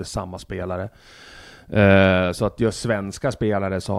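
No technical faults can be heard anywhere in this speech recording; the signal stays steady and intact throughout.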